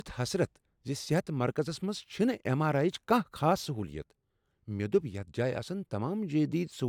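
Nothing in the speech stood out as a technical problem on listening.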